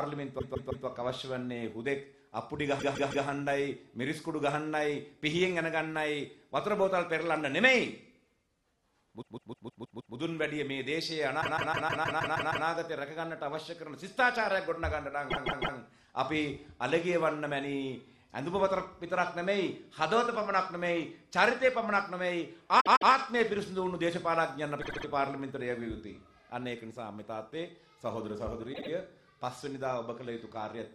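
Repeated frames stutter the audio at 0.38, 2.78, 9.21, 11.40, 15.30, 22.79, 24.81 and 28.72 s. A compressed block of 156.7 ms (78.4 ms in the last two) replays two to eight extra times, lengthening the audio by up to 1.25 s per event.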